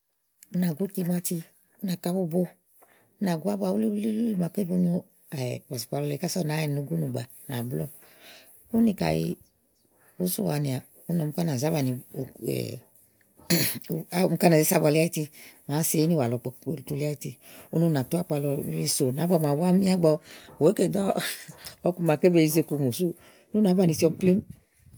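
No technical faults can be heard anywhere in this speech recording. Nothing in it calls for a timestamp or an explanation.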